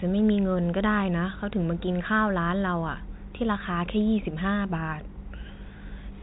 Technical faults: none

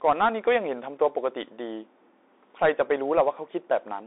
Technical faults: Bluetooth CVSD headset codec

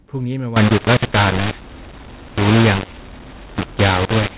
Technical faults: mu-law and A-law mixed up

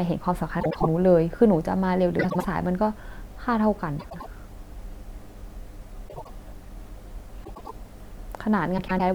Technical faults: frames out of order

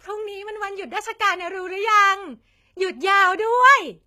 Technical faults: HE-AAC compression

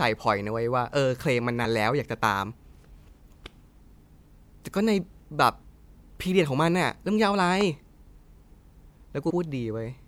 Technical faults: compressed frames skipped

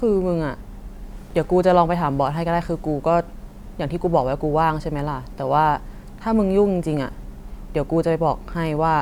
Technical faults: none

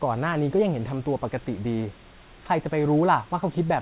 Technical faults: none

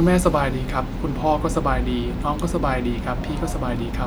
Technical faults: none

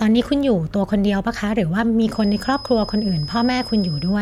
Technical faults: feedback whistle

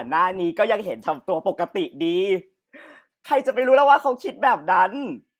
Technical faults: none

